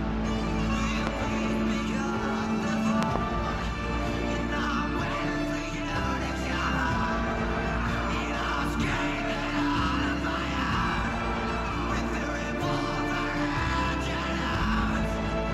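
A sudden voltage step or pulse, likely from a plug, switch, static discharge or driver glitch, entered the signal path, producing loud pops roughly 20 dB above the audio: a single pop at 1.07 to 1.09 s and a double pop at 3.03 to 3.18 s, with the sound continuing underneath.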